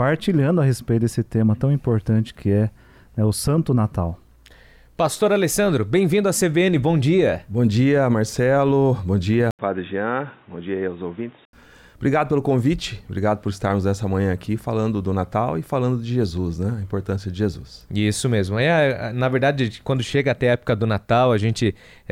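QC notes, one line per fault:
9.51 to 11.53 s, input switched to a poorer device: the sound suddenly turns dull and boxy, with nothing above 3.8 kHz, drops a few dB in level, and carries a new background noise sitting well below the signal, then clears again at 11.53 s. An 80 ms gap of silence marks the changeover. This is likely the recording path jumping to a narrower-band microphone or headset call profile, with its own tone, gain and noise, before switching back.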